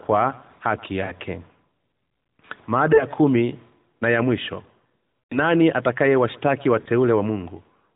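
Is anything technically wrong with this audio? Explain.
Yes, there are lost AMR speech frames at 1.06–1.12 s, 2.94–3.05 s (just before "kumi na ya mwisho"), 5.24–5.39 s and 6.82–6.89 s, against a narrowband sound consistent with a 12.2 kbps AMR-NB mode. Corrupted frames failed their checksum, so the decoder repeated the last good pitch and vocal-tract settings at falling gain. The three 40 ms gaps are shorter runs of two frames each. The 100 ms gap is drawn out and fades toward silence. Unlike a clean dropout, the gap is smeared rather than cut.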